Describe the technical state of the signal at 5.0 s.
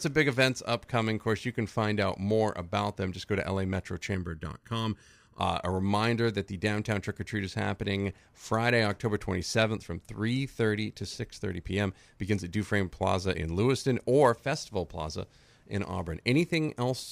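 At 5.0 s the speech is affected by channel delay (comb filtering), lasting from 4.15 to 5.40 s. One channel lags the other by under a millisecond before mono summing. Notches start near 700 Hz and repeat evenly, giving a hollow, phasey sound.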